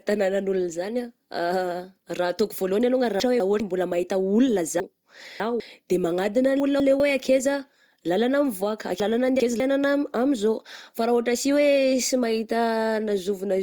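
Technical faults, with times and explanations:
3.2–3.6 s, 4.8–5.6 s, 6.6–7.0 s and 9.0–9.6 s: chunks out of order. A 200 ms slice of speech plays one, three, one and two chunks late respectively, so syllables come in the wrong sequence across three hard seams. Unlike a dropout or stutter, nothing is missing or repeated; it is only jumbled.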